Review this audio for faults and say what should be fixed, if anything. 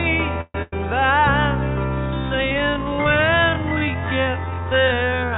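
Right at the start there's a call audio freeze from 0.41 to 0.55 s. The sound stops moving forward for 132 ms: the last bit gets carried on as a fading buzz or hiss, and the final 40 ms or so drop to silence. Then it picks up exactly where it left off, so nothing's lost, just a gap pushed in and the delay bumped by 132 ms. That's most likely packets stalling in transit until the jitter buffer ran dry. A jitter buffer with a bit more headroom, or better network stability upstream, would prevent this.

Hot on its heels, from 0.62 to 0.73 s, there's a burst of packet loss. Roughly 100 ms of audio never made it. The receiver covered it with about 98 ms of concealment, stretching out the last sound and fading it, so you hear a held buzz or hiss that sags away. When the audio comes back it has skipped ahead past the missing chunk. Adding forward error correction or redundancy to the stream would prevent this.

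From 2.38 s to the end there's a time-stretched section, played at about half speed (0.51×) with pitch unchanged. It drags, because short pieces are being repeated to fill the time. The likely cause is software stretching that stretch of audio to fit a set length. Matching durations upstream so nothing has to be stretched to fit would prevent it. The call path itself cuts everything above 4 kHz, which fits a G.711 link.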